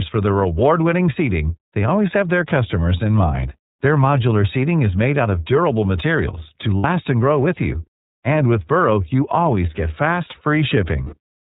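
Speech, coded throughout with the iLBC codec. Nothing above 4 kHz survives, so the voice is narrowband. The damage is plainly audible: a rough, slightly synthetic edge. The roughness fits iLBC's 30 ms frame mode, with each frame coded on its own. Lost iLBC frames cause two short gaps. The first runs from 6.78 to 6.85 s, between "of durable materials to" and "and grow with you". The second runs from 11.03 to 11.16 s. Each gap sounds like a held, buzzy vowel. The decoder repeats the last pitch cycle mixed with noise. The gaps point to about 60 and 90 ms of missing audio. The voice returns almost at once.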